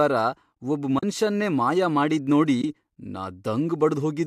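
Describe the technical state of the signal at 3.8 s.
At 3.8 s the speech is intact, carrying only the light texture of what is likely low-delay AAC compression working as it should.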